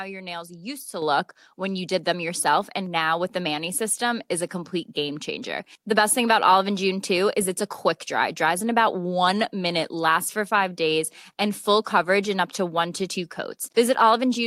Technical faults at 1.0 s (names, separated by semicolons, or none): microphone volume stepped up